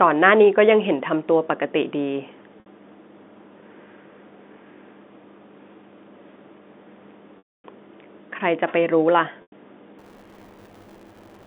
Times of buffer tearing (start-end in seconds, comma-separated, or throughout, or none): 9.98-11.47